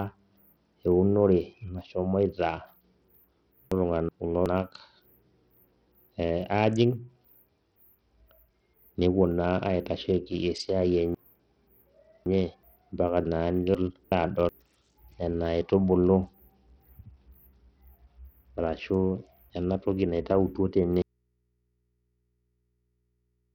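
From the start, the speech carries the signature of Bluetooth SBC compression, likely a low-bitrate link around 64 kbps. The coder splits the signal into a few wide sub-bands and starves the upper ones of bits, so the treble flickers in and out while the remaining bands are coarsely quantised. The damage is heavy: a gritty, grainy layer rides on every syllable. On a spectrogram the top octaves appear as ragged, blinking blocks with hard horizontal edges, and faint aliased energy sits between them.

At 3.72 to 4.46 s the speech briefly jumbles: chunks out of order. Audio in blocks of about 372 ms was written back in the wrong sequence, with one block landing a single chunk late, so two segments swap places. The same fault returns at 13.75 to 14.49 s. A longer case runs from 11.15 to 12.63 s, where a block arrives three chunks late and the displaced piece plays after three that should follow it. 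Each case brings three hard joins, heard as a garbled moment. On the waveform they show as abrupt amplitude steps, and on a spectrogram as vertical seams with broken formant tracks.

At 21.02 s the speech cuts off abruptly and does not return, an audio dropout to a faint residue that lasts to the end. The break is instant rather than faded, most likely a lost signal feeding a path that stayed live. What remains is low mains hum, around 50 dB below the speech. The waveform collapses to a near-flat trace, and a spectrogram shows broadband energy stopping at a clean vertical edge, with only thin horizontal hum lines continuing at the bottom.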